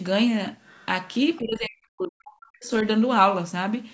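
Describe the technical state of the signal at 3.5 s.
At 3.5 s the speech is intact, with no fault present; it carries the ordinary sound of a call microphone path, whose high-pass filter trims the lowest bass and which passes nothing above 8 kHz.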